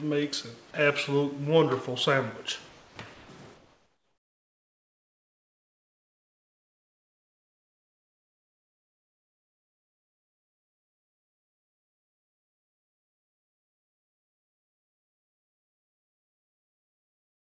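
Three short holes show up early, at 0.71 to 0.74 s, 2.69 to 2.96 s and 3.14 to 3.29 s, where the sound briefly gives way to flat, steady noise before picking up again. That's most likely sound dropped by the voice detector: the sender decided those bits were background, stopped transmitting, and the receiver filled the gap with comfort noise. The middle one is the longest, losing about 210 ms of actual sound.

From 3.56 s to the end, the background isn't the real thing anymore. It's comfort noise in place of the background, likely from discontinuous transmission, where only occasional noise updates were sent. It sits about 55 dB below the loud parts and comes out about 3 dB quieter than the original, a smooth, detail-free hiss instead of the real background. Like everything here, it's capped at 8 kHz by the 64 kbps G.722 call path.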